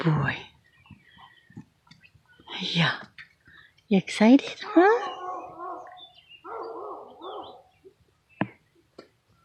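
AAC frame loss with concealment occurs from 8.17 to 8.21 s, a 43 ms gap that fits a single lost frame. The decoder filled it by reusing the last good spectrum, leaving a brief smeared, noisy or phasey patch in the audio.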